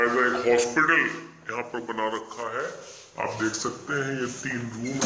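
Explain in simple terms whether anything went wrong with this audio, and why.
The whole clip plays back too slow and too low, a classic wrong sample rate problem. It runs at about 0.73 times normal speed and sits roughly 5.5 semitones flat from start to finish, which fits audio recorded at about 22 kHz being played as if it were 16 kHz.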